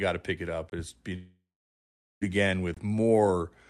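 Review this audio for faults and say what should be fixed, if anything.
There's a gap between chunks at 0.70 to 0.72 s, just after "to pick it up", and again at 2.74 to 2.77 s. Each hole is about 23 ms, spaced by 1.0 s chunks, so silence is left at each join. Fix it by scheduling every chunk to start exactly where the previous one ends and trimming any codec padding.

From 1.16 to 2.23 s the sound cuts out, most likely because of a long network dropout. The last sound is stretched into a fading buzz or hiss, then about 740 ms of near silence follows. Roughly 1040 ms of audio never arrives, and the sound resumes past the missing part. Prevent it by improving link stability or adding redundancy like FEC, so short losses get recovered instead of concealed.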